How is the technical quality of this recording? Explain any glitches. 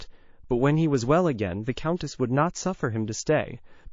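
Quality's fairly rough, with plainly audible codec damage throughout and one glitch.

The whole clip has that watery, swirly character with dulled treble, which is likely MP3 compression at a low rate, something around 32 kbps. Starved of bits, the encoder chops the top end and lets weak frequency lines flicker on and off.

At 1.96 s there's a pre-echo: a short hiss, about 21 dB above the surrounding quiet, creeps in for 44 ms before an attack, which lands soft and smeared. The codec spread noise across a long block, which fits a window of about 72 ms with no switch to short blocks.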